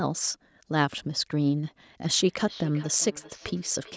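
From 2.16 s to the end at 3.96 s, the speech comes back as a feedback echo between two devices. A second device in the room plays the call audio aloud. The first microphone picks it up again, and its echo canceller misses it. The repeats arrive at a steady interval of roughly 0.4 s. They sound thin and ringing. The loudest sits about 19 dB below the speech. Above 8 kHz there is nothing, which fits normal call microphone processing.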